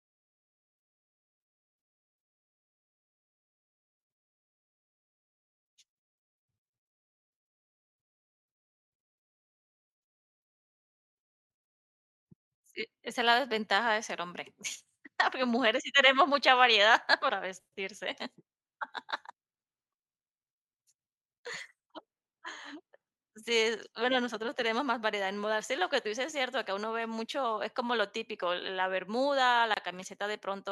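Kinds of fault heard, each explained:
Gap at a join of encoded pieces: the speech was encoded as separate segments and spliced without removing the encoder's leading delay and last-frame padding, so that dead air survives at the seam. Near the end of the clip, from 29.74 to 29.77 s, the speech drops out for about 27 ms, the edges softened by the codec, and then resumes exactly where it stopped, with nothing missing.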